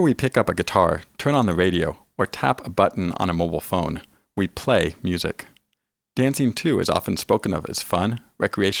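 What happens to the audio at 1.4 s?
Nothing goes wrong at 1.4 s; the speech carries straight through that moment intact, with no dropout, click or other audible fault.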